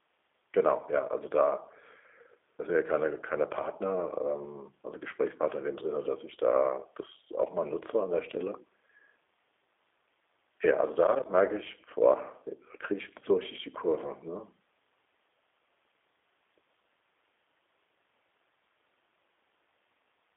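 Throughout, G.729 codec damage gives the speech a rough, synthetic buzz from its pulse-coded model, unlike a plain band-limit. Nothing passes above 3.7 kHz, which fits an 8 kbit/s line.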